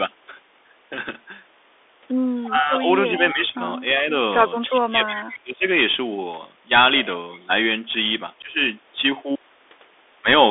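Across the whole clip the speech carries the damage of the Bluetooth CVSD headset codec. The line is confined to roughly 300 Hz to 3.6 kHz, so everything above that is missing. At 64 kHz, one bit per sample can only step the waveform up or down, and its adaptive step size falls behind on loud, bright sounds. That leaves s sounds scratchy, a granular hiss under the voice, and plainly audible distortion on louder passages.

From 2.44 to 2.51 s a faint echo leak appears, a delayed copy of the voice the loudspeaker side played, arriving 344 ms late at about 25 dB below the speech. The likely cause is a loudspeaker on the other side whose echo canceller let part of its own playback back into the send path. Straight after, from 2.50 to 2.88 s, the talker dips by roughly 15 dB. This is speech suppressed in double talk: with both sides active, the canceller likely could not tell the local voice from the echo and attenuated both.

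The pattern repeats. From 3.08 to 3.61 s the speech drops by up to about 20 dB. Inside that stretch, from 3.17 to 3.33 s, the echo returns louder, about 15 dB below the speech and again 344 ms late. A brief, shallow dip of a few dB follows at 3.93 to 4.07 s. The longest suppression runs from 4.68 to 5.66 s, close to a second. It reaches roughly 25 dB down. During it, from 5.16 to 5.36 s, the echo leaks through at about 20 dB below speech. A last, very faint scrap of echo, around 35 dB down, appears at 7.34 to 7.40 s.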